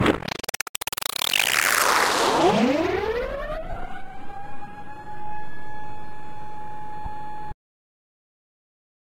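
A recording of everyday sounds with lost LE Audio frames at 0.75 s, 7.05 s and 3.70–3.77 s. The first gap is 7.5 ms, which fits a single 7.5 ms LC3 frame, and the one at 7.05 s is 15 ms. At 3.70 s about 45 ms drops out, scattered over 60 ms, with the longest run around 30 ms. The decoder conceals each gap by repeating the last spectrum with randomised signs, so tonal parts blur into brief noisy smears. On a spectrogram, crisp harmonic lines give way to short vertical bands of diffuse energy. The waveform shows hissy, phase-scrambled segments instead of clean periodic shapes.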